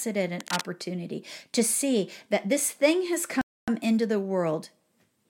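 A worn cable, connector or control was likely disturbed at 0.40 s, its contact resistance jumping about erratically until 0.61 s. That injects a dense, uneven burst of cable scratch noise, a rough scratching that sits only a little below the speech itself. At 3.41 s the player likely ran short of data or was held up, causing a playback stall. The output drops to silence mid-flow for 264 ms, and the speech resumes at 3.68 s.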